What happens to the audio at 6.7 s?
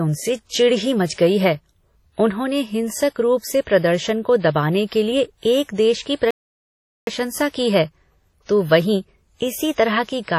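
At 6.7 s you're in the middle of a playback stall: the speech cuts to silence from 6.31 to 7.07 s, about 0.77 s, likely because the player ran dry of data. Across that spot, and the whole clip, there's also the washy, ringing smear of WMA compression, which likely fits a 32 kbps encode.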